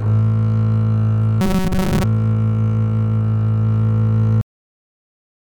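From 1.41 to 2.04 s the music turns into a rigid, metallic buzz locked at about 188 Hz: robotic sound from repeated short buffers. A stretch of roughly 5.3 ms is likely being replayed over and over while fresh audio arrives too slowly, so for most of that span the real signal is skipped. The buzz stays at a fixed pitch while the music's rough outline carries on underneath, which separates it from a pitch shift or a comb-filter effect, since those still track the original pitches.

At 4.41 s the audio simply stops, mid-sound, and falls to digital silence for the rest of the clip. This is a cut-off end: the final buffers were never written out or played, so whatever was sounding gets no decay or release. A fade-out would taper first, and a dropout would let the music come back, but here the silence starts abruptly and lasts to the end.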